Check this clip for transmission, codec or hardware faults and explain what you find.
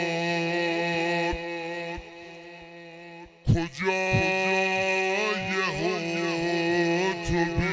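One fault runs through the whole clip: a wrong sample rate. From start to finish the audio plays at about 0.73 times its proper speed and sits about 5.5 semitones low, which fits material recorded near 22 kHz being played back at 16 kHz with no rate conversion. Because each sample is simply clocked out more slowly, timing and pitch drop by the same ratio, so everything sounds slowed, heavy and dark. That lock-step change is what separates it from a pitch-shift or time-stretch fault, where only one of the two moves.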